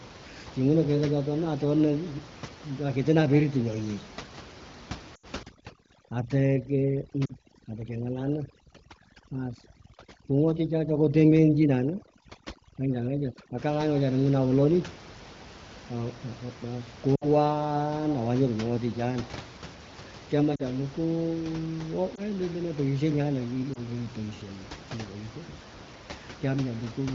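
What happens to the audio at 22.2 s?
Radio errors around 22.15 to 22.21 s corrupted a speech frame, so it failed its checksum, a case of lost AMR speech frames. The decoder filled the gap by reusing the previous pitch and vocal tract settings at reduced gain, producing a brief dip or warble that fits a single lost 20 ms frame.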